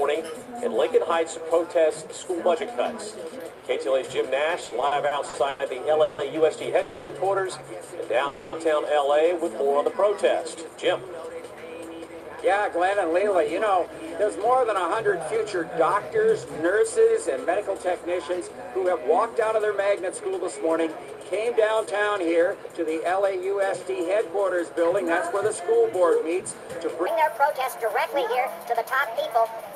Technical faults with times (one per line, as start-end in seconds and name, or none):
4.65-6.20 repeated stalls (stutter)
6.82-7.11 call audio freeze
8.27-8.54 call audio freeze
9.35-10.56 jitter buffer slow-down
12.07-15.36 jitter buffer speed-up
16.16-23.37 jitter buffer speed-up
27.06-29.75 section at the wrong speed